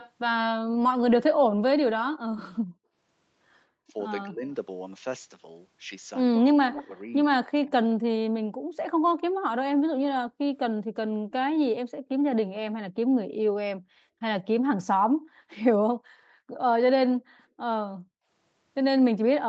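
An echo canceller on a loudspeaker-equipped end of the call likely failed to remove all of its own playback, so a delayed copy of the far talker was sent back. This echo leak is first heard from 0.0 to 0.11 s as a faint scrap well under the main speech, trailing by about 0.19 s. It returns from 6.39 to 7.7 s, louder this time, about 15 dB below the speech, as a second voice at the same 0.19 s lag.

At 3.87 to 4.45 s, both sides talk at once and the canceller likely cannot tell the near talker from the loudspeaker echo, so it turns both down. This speech suppression in double talk shows as a dip of roughly 20 dB, broken up over about a third of a second. It happens again, much harder, from 6.64 to 8.21 s, overlapping the louder echo. The near voice is nearly wiped out in pieces for around 0.7 s.

From 9.87 to 11.33 s and again from 13.77 to 17.6 s, the canceller clamps the microphone whenever the loudspeaker plays. 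This background gating by the echo canceller pulls the room sound down by about 40 dB for roughly 0.3 s in the first span and about a second in total across the second. The ambience audibly drops to near silence and then snaps back. All of this sits within the Opus call path's band, which stops at 8 kHz.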